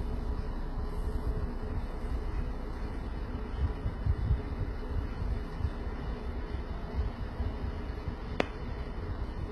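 HE-AAC compression throughout: the treble, ending sharply near 11.8 kHz, sounds rebuilt from copied lower bands, heavily gritty and metallic, likely from a very low bitrate around 16 kbps.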